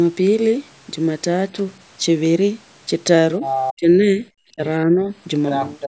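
From 3.41 to 3.73 s, and again from 5.47 to 5.9 s, a second voice sits only a little below the main talker. This is the other side's voice leaking through, likely loudspeaker echo the canceller failed to remove. On a spectrogram it shows as overlapping harmonic traces.

Between 3.74 and 4.25 s, 4.5 and 4.62 s, and 4.82 and 5.11 s, the talker dips sharply. This is speech suppressed in double talk, likely the canceller turning everything down while both sides spoke. The first two drops reach about 25 dB and the third about 10 dB, cutting visible notches in the waveform envelope.

From 5.9 s to the end, the room sound falls away by about 34 dB. This is background gated by the echo canceller: the noise floor drops out abruptly on the spectrogram. Throughout the call, the normal call microphone processing leaves nothing visible above 8 kHz.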